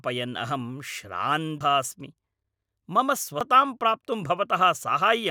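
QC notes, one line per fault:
1.61 s and 3.41 s: audio missing between chunks. The speech skips abruptly, about a fifth of a second gone each time, with the two sides butted together and no silence. This likely comes from a recorder working in 2-second chunks that drops audio at each handover. On the waveform, the envelope jumps discontinuously with no gap; on the spectrogram, harmonics break off and restart misaligned at a sharp vertical seam.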